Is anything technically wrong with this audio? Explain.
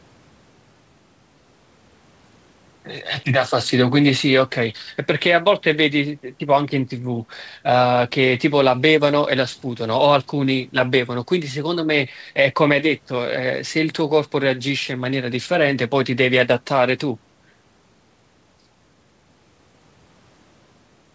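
No, nothing technically wrong can be heard here.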